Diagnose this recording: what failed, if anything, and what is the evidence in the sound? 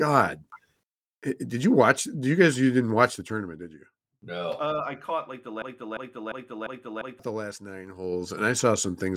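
The speech has zipper noise from a gain stage in the driver or buffer path. From 3.04 to 3.77 s the level falls by roughly 15 dB in 2 dB steps, about ten a second, each step ticking audibly. It rises again similarly from 7.83 to 8.37 s. The waveform envelope shows a staircase, and the spectrogram shows faint vertical click lines.

A broken-record loop runs from 5.62 to 7.19 s. A 0.35 s fragment is repeated five times back to back, and the speech that belonged there is lost. This is likely a playback or stream stall that kept re-sending its last buffered piece. On a spectrogram, identical blocks tile side by side with hard seams.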